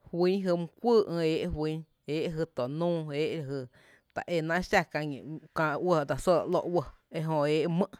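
A speech clip with CD scratch ticks: four brief clicks between 6.28 and 7.02 s, the longest about a millisecond, where an unrecoverable blemish recurs every disc revolution.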